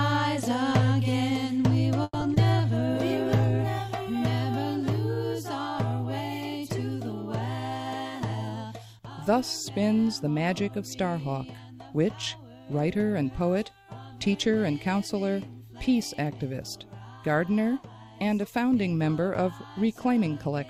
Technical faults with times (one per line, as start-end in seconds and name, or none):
2.03-2.29 call audio freeze
2.20-2.38 short concealed packet loss
8.20-8.94 jitter buffer speed-up